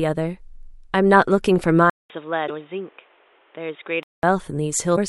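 Speech recording in which the sound turns dull and boxy at 1.90 s, after a 200 ms silence, and stays that way until 4.23 s. Over that stretch nothing reaches above 3.8 kHz, the level drops by around 5 dB, and a new background noise sits roughly 35 dB under the speech. That band-limited, quieter, differently coloured section points to an input switched to a poorer device, likely a headset's call profile or a lesser microphone, before the original input returns. Two brief glitches, from 2.44 to 2.50 s and from 4.93 to 4.98 s, are damaged data in a compressed stream. Corrupted bytes there leave the decoder unable to read those frames correctly, so it produces a short glitch of roughly 55 to 60 ms while it loses sync and hunts for the next valid frame header.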